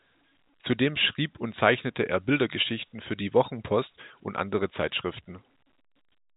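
Nothing stood out on listening to this speech, which comes through as ordinary G.711 telephone coding with its usual narrow band topping out around 3.8 kHz.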